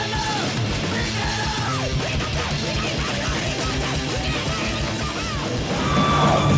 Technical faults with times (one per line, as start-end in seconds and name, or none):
1.68-1.70 skip ahead
1.77-3.83 jitter buffer speed-up